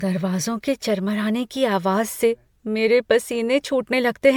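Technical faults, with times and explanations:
Throughout, generation loss: hollow, swirly speech with smeared onsets, likely from about seven MP3 passes at 128 kbit/s. The spectrogram shows accumulating holes and a cut-off at 19.9 kHz.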